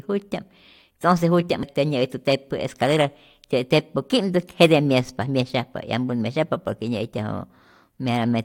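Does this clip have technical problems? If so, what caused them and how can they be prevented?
Yes. At 1.62 s the speech jumps ahead abruptly with a small blip, and a stretch of the programme is simply gone rather than paused or stretched. That's most likely a stream segment skipped: one chunk of the segmented stream didn't arrive in time, so the player dropped it and carried on with the next one. To prevent it, give the player a deeper buffer and retry failed segment requests before skipping ahead.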